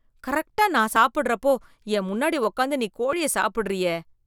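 At 0.96 s and again at 3.13 s the speech lurches forward with no gap of silence, as if a sliver had been snipped out and the ends butted together. Each jump removes only about ten milliseconds of sound. This is likely a dropped buffer (overrun): the recording software failed to collect a block of samples before the hardware wrote over it, so that block was lost and the audio on either side was spliced directly.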